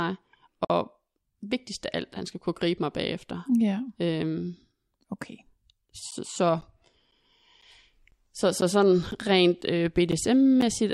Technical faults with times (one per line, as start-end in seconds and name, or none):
0.65-0.70 gap at a join of encoded pieces
6.11-10.62 periodic USB or driver dropouts